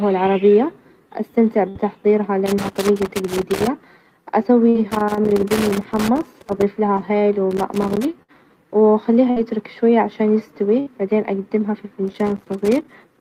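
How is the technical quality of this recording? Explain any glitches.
The technical quality is poor, with two recurring faults.

A burst of packet loss occurs five times: 1.69–1.78 s, 4.69–4.78 s, 8.23–8.31 s, 9.30–9.39 s and 10.80–10.89 s. Each time, roughly 60 ms of audio never arrived in time. The receiver covered about 56–63 ms by extending the last received sound and fading it, so each gap is heard as a brief held buzz or decaying hiss. The speech then jumps ahead with a short piece missing.

Loose connector crackle appears in four stretches: 2.46–3.67 s, 4.91–6.63 s, 7.51–8.05 s, and from 12.08 s to the end of the clip. A worn or dirty contact is repeatedly making and breaking as it moves. This chops the signal on and off, and any DC on the line adds pops at each transition. The result is an irregular scratching crackle laid over the speech for the length of each stretch.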